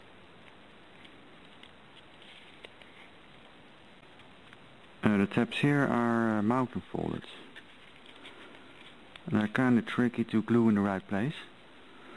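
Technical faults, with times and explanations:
No technical faults can be heard anywhere in this audio.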